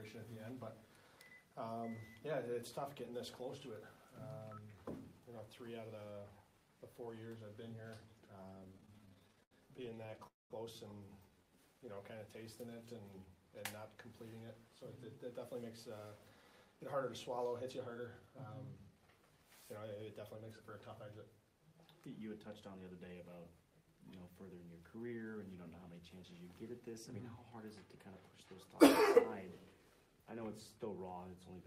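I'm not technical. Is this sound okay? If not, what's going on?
No. The sound has several problems, all from audio arriving unevenly over a network connection.

From 8.59 to 10.27 s there are repeated stalls (stutter). The sound keeps catching and dragging, with 31 tiny hiccups, the longest about 77 ms. Pieces of audio kept arriving late, so the receiving device repeatedly ran out of sound to play and stretched the last bit to cover each wait. In total it filled about 0.4 s this way. Nothing is lost, but the flow is choppy.

Right after, from 10.27 to 10.52 s, the sound briefly freezes. It hangs for about a quarter of a second, mostly going silent for about 0.18 s, and then carries on where it stopped. This is likely a call audio freeze: a longer hold-up on the way left the device with nothing to play, so it inserted a pause. No audio is missing, but everything after it now plays a bit later.

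From 11.31 to 12.67 s there is a jitter buffer slow-down. The sound plays at about 90% of its normal speed without becoming lower in pitch, so it feels slightly drawn out. The device was short of stored audio and repeated tiny slices of sound, adding about 0.15 s, to rebuild its reserve.

Three times the sound runs slightly fast: 14.68 to 19.03 s at about 104% speed, 21.53 to 22.93 s at about 106%, and 26.73 to 28.33 s at about 102%. These are jitter buffer speed-ups. The device had built up too much waiting audio and trimmed out tiny slices to catch up, removing roughly a fifth of a second, a tenth, and a twentieth respectively. The pitch stays the same, and the 106% stretch sounds a little hurried.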